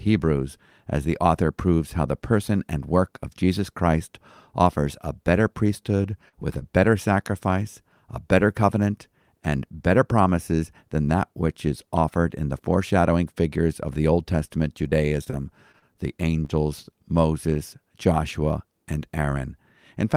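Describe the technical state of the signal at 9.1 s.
At 9.1 s the speech signal is intact, with no dropout, clipping, glitch or other technical fault.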